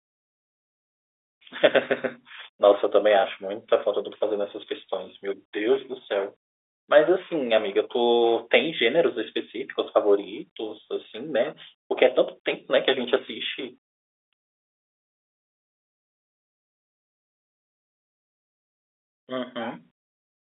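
No technical faults can be heard in the speech, which carries the narrow band of an ordinary G.711 mu-law telephone line, running from about 300 Hz to 3.6 kHz, with only the faint level-following hiss that this coding leaves behind.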